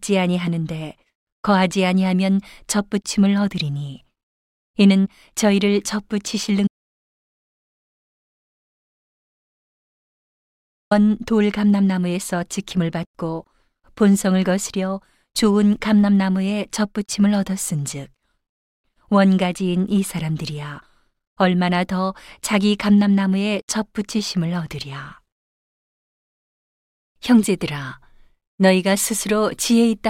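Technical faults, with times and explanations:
6.67 to 10.91 s, audio dropout to silence: the input feeding the recorder was likely lost for this stretch, through a disconnected device, a failed link or a mute, while recording carried on and wrote silence. The speech cuts off abruptly mid-flow and returns just as abruptly about 4.24 s later. The gap between is dead digital silence with no room tone at all, so whatever was said in those four seconds is gone.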